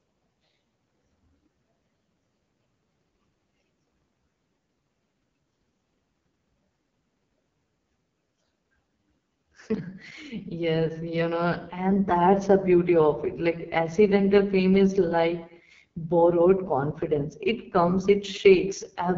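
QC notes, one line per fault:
Throughout, AMR wideband (HD Voice) codec: the speech is rough and raspy, consistent with its lowest 6.6 kbit/s mode, with nothing above 7.3 kHz.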